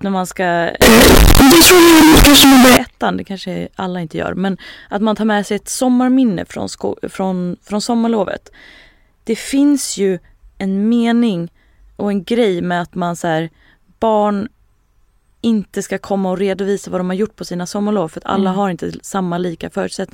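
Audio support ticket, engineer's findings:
Float read as integer, 0.82–2.77 s, ending just before "ettan det kanske alla". Speech turns near-square, very loud and harsh, noise floor level with speech, pitch still traceable. Likely cause: 32-bit float samples decoded as 32-bit integers in the sample-format conversion, so sign and exponent bits dominate.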